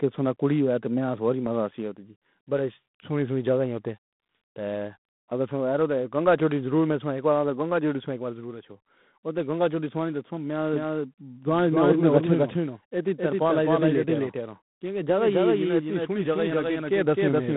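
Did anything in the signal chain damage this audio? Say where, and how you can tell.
Yes. At the codec stage, G.726 ADPCM coding leaves a harsh, level-following hiss throughout and nothing above 3.9 kHz, which points to 24 kbit/s operation.

From 10.74 s to the end, a doubled audio track appears: an equally loud, dry copy trails by roughly 300 ms and starts abruptly, likely from a second, slower capture path.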